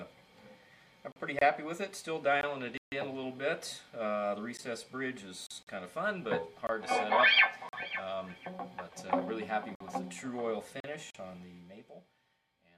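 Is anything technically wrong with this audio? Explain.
Yes, the sound has two kinds of dropout.

Block of digital silence at 1.12, 2.78 to 2.92, 5.47 and 11.11 s: samples were zeroed, likely when output buffers went unfilled, cutting abruptly to silence. The blocks last 40 ms, and the 145 ms one is an audible hole.

Gap between stream segments at 1.39, 2.41, 4.57, 5.63, 6.67, 7.69, 9.75 and 10.80 s: mismatched timestamps between one-second segments leave holes the player fills with silence. These hard-edged breaks of 16 to 53 ms fall at one-second segment boundaries.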